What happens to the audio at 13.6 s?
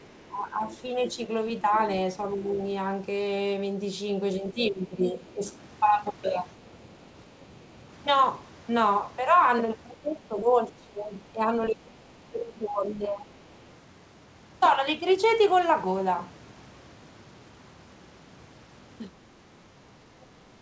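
Other side's voice leaking through, from 13.62 to 13.66 s: a very faint scrap of a second voice, far below the main speech, lasting about 40 ms. It is likely a remnant of the far end's loudspeaker playback that the echo canceller left in the microphone signal.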